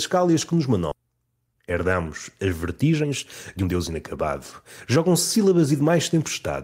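Speech, with a skip ahead at 0.91 to 0.93 s, right after "que nos": roughly 0.7 s of audio is gone, and the two sides are butted together with no silence. Unlike a dropout, nothing is filled in, and unlike a speed-up, the sound simply leaps forward. This is audio discarded in transit or by an overflowing jitter buffer while later packets were already queued. Three stretches of jitter buffer speed-up follow, where the receiver trimmed short pitch-period pieces to shrink excess buffered delay: 2.83 to 3.12 s at 138% speed (about a tenth of a second removed), 3.57 to 4.30 s at 118% (about 150 ms), and 4.96 to 5.90 s at 107% (under a tenth of a second). These sound hurried but keep the same pitch, which separates them from a plain playback-rate change.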